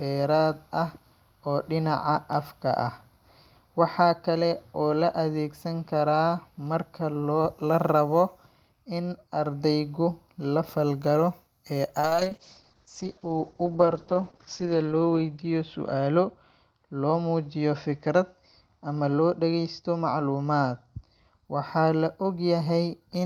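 A speech recording with a call bitrate drop from 12.0 s to 21.5 s. The encoder is starved of bits, and the sound becomes coarse and watery. The audio band also narrows from 20 kHz to 8 kHz, which muffles it, and the worst stretch lasts 2.71 s. The roughness fits a fall from about 48 kbps to 8 kbps. Unlike packet loss, there are no gaps or clicks, and unlike a fixed filter, the quality degrades and then recovers.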